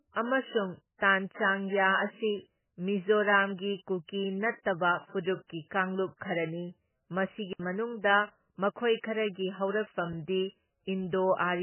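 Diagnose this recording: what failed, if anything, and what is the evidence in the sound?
The whole speech clip is band-limited, with nothing above 3 kHz. The damage is heavy: weak spectral detail drops in and out from frame to frame, giving a watery, swirling texture, and attacks smear. This points to the codec stage, likely MP3 compression at a very low bitrate, around 10 kbps. With so few bits, the encoder discards weak frequency lines and cuts the treble at a fixed point. What survives is a narrow, unstable band.

At 10.13 s there is a block of digital silence about 5 ms long. The audio stops and restarts with no fade. Because the gap is so short, it is heard as a brief tick or dip rather than as a silence. This places the fault at the driver or buffer stage. Either the output buffer was not filled in time, or a calculation produced invalid values that were replaced with zeros.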